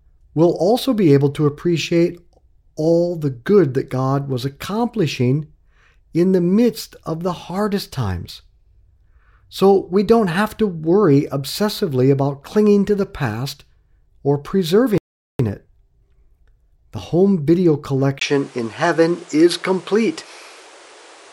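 At 14.98 s the speech drops into silence and picks up again at 15.39 s exactly where it broke off, with nothing skipped. That is a rebuffering stall: the player used up its downloaded audio and waited for more data before continuing. No material is lost, but the pause adds about 415 ms to the running time and interrupts the natural flow of the speech.

From 18.19 s to the end, the sound turns duller and narrower after a brief gap of about 20 ms. Nothing remains above 11.4 kHz, the level shifts by roughly 5 dB, and a new noise floor appears about 30 dB below the speech. The likely cause is an input switched to a poorer device, such as a different microphone or a headset's call profile, which brings its own bandwidth, tone, gain and background noise.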